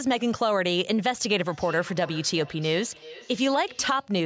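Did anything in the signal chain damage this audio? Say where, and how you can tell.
Yes. A feedback echo between two devices on the call: one plays the other's audio back into its microphone, so speech returns every 0.4 s or so, from 1.47 to 4.2 s, at about 18 dB down.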